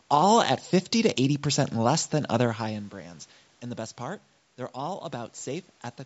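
No technical faults detected in the speech; level movements are smooth and deliberate, and the top end stops at 8 kHz.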